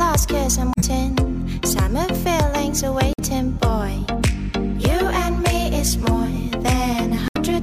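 Damaged data in a compressed stream corrupts the frames at 0.72–0.84 s, 3.12–3.20 s and 7.28–7.37 s. The decoder misreads them and hunts for the next valid frame header, leaving brief glitches. The second one also adds about 10 ms.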